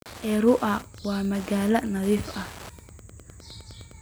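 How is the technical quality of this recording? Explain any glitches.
The recording is marred by Wi-Fi interference throughout the speech, a steady ticking roughly 20 dB under the voice. A nearby radio's beacon, every 102.4 ms, is rectified by the audio circuit, giving about ten ticks a second, far slower than mobile-phone buzz.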